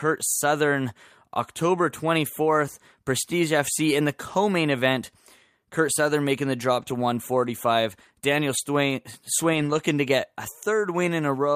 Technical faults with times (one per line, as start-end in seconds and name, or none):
6.81-6.91 lost packet rebuilt from error correction
8.57-8.59 lost packet rebuilt from error correction
9.53-9.79 lost packet rebuilt from error correction